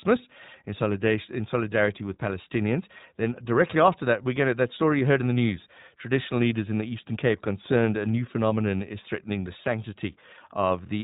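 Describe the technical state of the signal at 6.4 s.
At 6.4 s you're hearing the iLBC codec, which runs across the whole clip. It codes each short frame on its own, which fits its 20 ms, 15.2 kbps mode, and cuts everything above 4 kHz, so the speech sounds muffled, rough and plainly synthetic.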